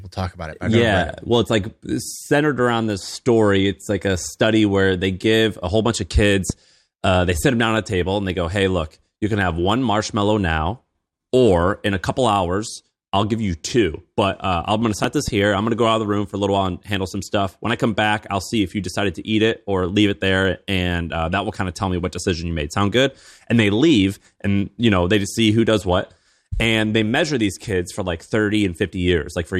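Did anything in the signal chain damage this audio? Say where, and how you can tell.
Yes: a voltage spike, likely from a plug or switch in the analogue wiring, puts a loud pop at 6.50–6.52 s and a double pop at 15.04–15.30 s over the speech.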